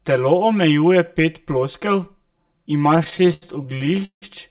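Channel delay (comb filtering) runs through the whole speech clip. One channel lags the other by about 5 ms, and the mono sum cancels at evenly spaced frequencies from around 100 Hz upward. The voice sounds hollow and phasey, within a narrowband call sound topping out at 4 kHz.

From 2.96 to 4.24 s come repeated stalls (stutter). Packets arrived late, so the jitter buffer kept running dry. The receiver stretched the last sound over more than twenty gaps, about 0.46 s in all, the longest 169 ms. Nothing drops out, but the speech drags and stutters.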